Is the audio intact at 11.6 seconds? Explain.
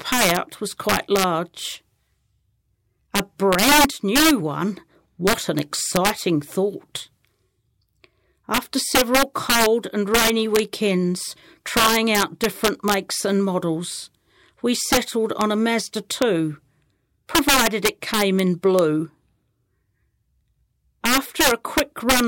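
No. At 11.6 s, as throughout, loud peaks of the speech break into violent cracks, sharper than clipping: integer overflow, with about 8 dB of overdrive wrapping a small fraction of samples to the opposite sign.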